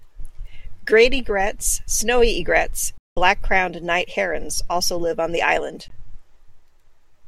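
At 2.98 s the speech cuts to silence for about 190 ms, until 3.17 s. A second, brief gap follows at 5.88 s. Each is likely a Bluetooth dropout: late packets were discarded. Edges are abrupt or fade over a few milliseconds, and speech resumes further along, as if it continued unheard.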